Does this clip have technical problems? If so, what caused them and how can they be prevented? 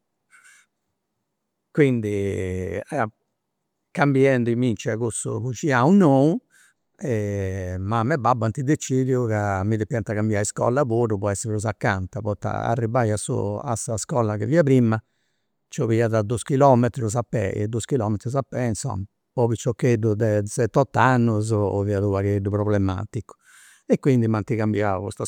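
No, there are no technical faults to report in this speech recording, so nothing here needs a cause traced or a preventive fix.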